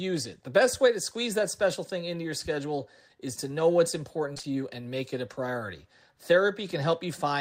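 Right after "is to know what's", short concealed packet loss strikes three times back to back, at 4.33–4.37, 4.37–4.41 and 4.41–4.45 s, before "you and make it". Each missing 20 ms was patched by extending the preceding sound and blending back, giving a smeared wobble rather than the silent hole a plain dropout leaves.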